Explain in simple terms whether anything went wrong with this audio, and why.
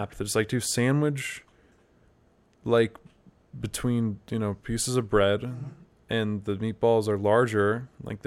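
Nothing went wrong here: listening to the speech all the way through, there's no glitch, dropout or distortion to point to at any moment.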